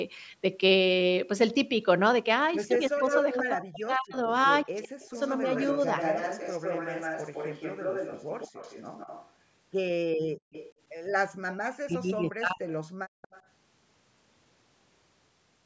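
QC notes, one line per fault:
2.73–13.42 s, echo leak: a delayed copy of the speech returns at 2.73–3.37 s, 5.01–9.31 s, 10.52–11.56 s and 12.68–13.42 s, trailing the original by 158, 162, 165 and 167 ms. It is nearly as loud as the direct speech in the first stretch and much quieter by the last. The likely cause is a far-end loudspeaker whose echo canceller left part of the microphone pickup in the return path, so the talker hears themselves back.
2.77–5.17 s and 11.52–12.81 s, speech suppressed in double talk: the speech dips sharply, reaching around 40 dB of attenuation and totalling about a second in each span. Both spans overlap echo activity. The likely cause is both sides talking at once, so the echo canceller could not tell the local talker from the loudspeaker echo and pulled both down together.
10.25–10.52 s and 12.99–13.22 s, background gated by the echo canceller: the room sound drops out for roughly 0.2 s and then 0.15 s, falling by as much as 36 dB before returning. 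This happens because the canceller clamps the microphone hard while the loudspeaker plays and releases it afterwards, which leaves brief holes of near-silence in the ambience. Band-limiting to 8 kHz from the call microphone processing is present throughout but is normal.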